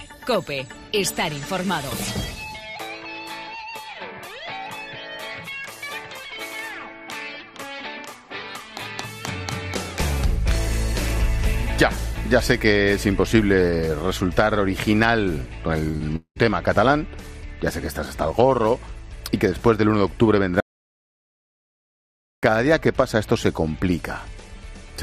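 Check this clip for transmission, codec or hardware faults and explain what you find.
Three kinds of fault appear, clustered around 16 s and again near 21 s.

Short concealed packet loss occurs twice, at 15.91 to 15.95 s and 15.97 to 16.02 s. Each time about 20 ms of audio failed to reach the decoder in time, and the receiver extrapolated from the preceding sound to cover it. The result is a quick smear or flutter rather than a clean gap.

A long network dropout follows from 16.16 to 16.44 s. A 200 ms stretch never arrived, most likely through a network stall. The decoder stretched the last sound into roughly 0.2 s of fading synthetic buzz or hiss, then about 90 ms of silence, and the audio resumes with a few milliseconds missing.

An audio dropout to silence runs from 20.60 to 22.43 s, about 1.83 s in total. The signal cuts to silence with no room tone underneath, which points to a lost input, likely a disconnected device or a mute, while the recorder kept writing samples. 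Whatever happened in that span is gone.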